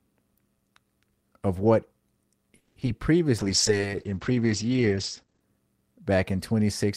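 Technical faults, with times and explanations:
2.56–2.88 s, repeated packet loss (robotic sound): four gaps in about 0.3 s, the longest 200 ms. Roughly 230 ms is patched by stretching the previous sound and 40 ms drops out entirely, giving a choppy stutter. The holes and repeated fragments set it apart from a bitrate drop.
3.39–5.47 s, call bitrate drop: the speech turns coarse and watery, and the top end is cut from 20 kHz to 8 kHz for about 2 s, which fits an encoder rate falling from around 32 to 12 kbps. The sound stays continuous with no gaps, unlike packet loss.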